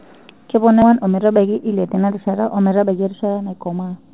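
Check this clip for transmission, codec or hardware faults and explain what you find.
Three faults are audible in this speech clip.

Channels drifting apart, throughout: A slowly moving flanging colours the sound when the channels are heard together. The two channels come from devices on separate clocks, out of step by around 50 ppm, so the delay between them creeps up to only a few tenths of a millisecond by the end. Summed to mono, that sliding offset sweeps comb-filter notches gradually across the band, which is why the tone seems to swirl.

Skip ahead, 0.82 to 0.84 s: The speech lurches forward abruptly, with no silence or fill at the join, and roughly 0.7 s of audio simply vanishes. The sound on either side of the jump is spliced almost directly together. Later packets were already waiting, so a stretch was discarded, whether lost in transit or thrown out by an overflowing jitter buffer, and playback resumed further on.

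Jitter buffer speed-up, 0.91 s to the end: From here the speech runs at 111% of normal speed with its pitch unchanged, so it sounds hurried. After the jump the jitter buffer was holding more audio than its target. To shrink that backlog, the receiver repeatedly cut out short pieces about one or a few pitch periods long. Together these removals take out about 0.4 s.

The bandwidth stops at 4 kHz, which fits a G.711 A-law call path at 64 kbps working as expected.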